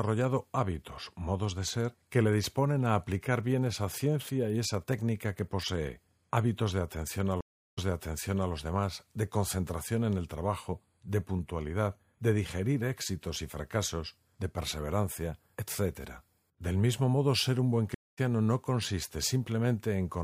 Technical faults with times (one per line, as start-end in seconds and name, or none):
7.41-8.51 stream reconnect
17.94-18.19 stream reconnect